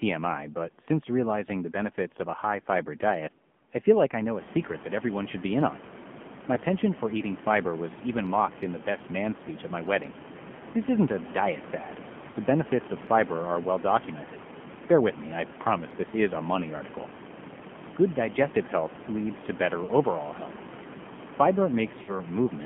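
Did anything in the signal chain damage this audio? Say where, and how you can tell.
Yes. At the codec stage, the whole clip carries AMR narrowband mobile codec damage. The band runs only from about 150 Hz to 3.4 kHz, with nothing above, and the speech has a plainly buzzy, synthetic edge. That edge comes from the codec rebuilding each 20 ms frame from a vocal-tract model and a sparse pulse excitation. The coarseness fits a low bitrate of about 7.4 kbps. The room noise that rises by about 21 dB around 4.5 s picks up the same swirling texture.

At the network stage, lost AMR speech frames cause a break from 22.02 s to 22.20 s. For about 60 ms, which fits three consecutive 20 ms frames, the sound smears and sags toward silence instead of cutting cleanly. The frames failed their checksum, so the decoder repeated the last good pitch and spectral settings at decaying gain. That concealment produces the drawn-out fade, and the speech returns weak or rough just before the clip ends.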